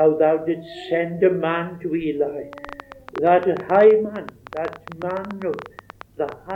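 From 2.53 s to 6.51 s a train of clicks ticks over the sound at about 11 per second, unevenly spaced and roughly 5 dB above it, likely from nearby equipment interference.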